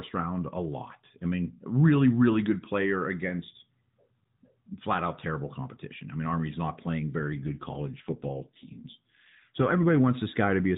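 After "not playing", from 7.22 to 9.99 s, an AMR rate drop makes the speech rougher and more synthetic, which fits 12.2 falling to 5.9 kbps.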